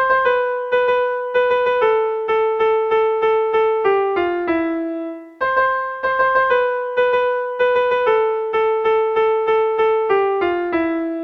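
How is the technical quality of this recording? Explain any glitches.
No glitches turn up anywhere in this recording. There is nothing here that calls for an explanation.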